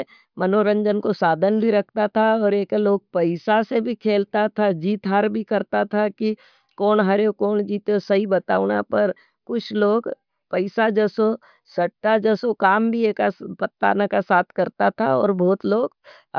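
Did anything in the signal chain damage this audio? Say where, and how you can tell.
No, nothing along the chain from capture to playback audibly damaged this speech recording.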